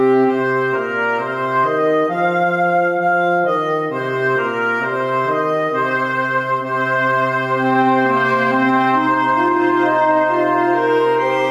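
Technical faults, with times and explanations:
Throughout, gain pumping: the gain ducks about 5 dB under loud sounds and recovers in gaps, never silenced as a gate would; likely a limiter taming excessive gain.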